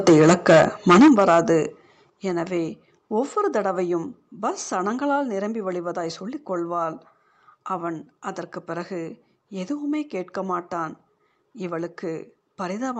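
Speech, and it opens with microphone overload from 0.07 to 1.39 s: the peaks sit about 11 dB past the converter's ceiling, with roughly a tenth of the samples flattened, so the loud syllables crackle harshly. The likely cause is an input gain set too hot. You also get the microphone volume stepped down three times, at 0.09 s (about 2 dB), 1.08 s (about 8 dB) and 2.1 s (about 7 dB). Each is a sudden drop in both voice and room level, pointing to the call software pulling the input gain after those distorted peaks. The call path carries on underneath with an 8 kHz top end, which fits Opus at around 48 kbps.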